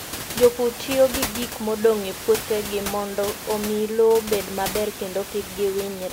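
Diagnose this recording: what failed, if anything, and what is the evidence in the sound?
Nothing in the chain has failed: the speech signal arrives intact at every stage, with only the room's own background sound sitting about 10 dB beneath it, which belongs to the recording itself.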